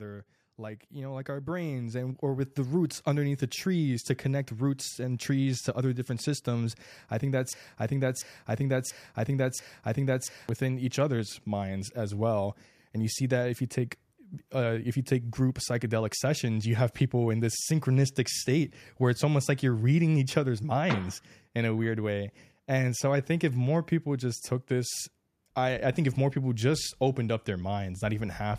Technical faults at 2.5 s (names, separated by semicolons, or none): automatic gain rising